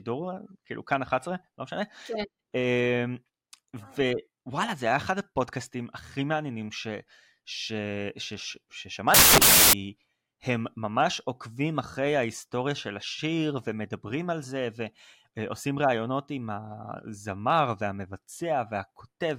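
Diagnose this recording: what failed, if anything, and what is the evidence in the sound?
Samples built from the wrong bytes, 9.14 to 9.73 s: a sample-format conversion fault misassembles each sample's bytes, so the speech becomes a burst of loud, harsh broadband noise.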